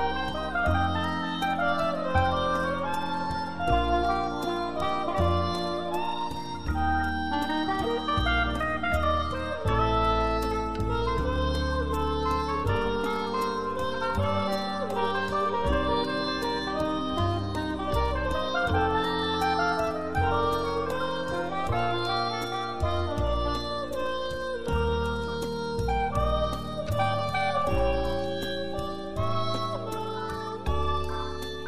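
Nothing in this one catches the ear as a technical fault; the sound just runs along undisturbed the whole way.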